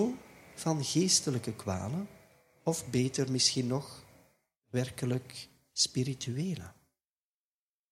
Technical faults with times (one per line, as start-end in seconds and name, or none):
none